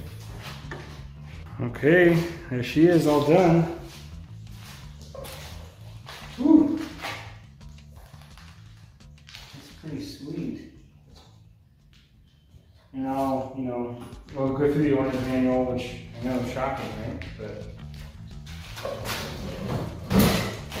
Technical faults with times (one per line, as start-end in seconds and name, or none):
none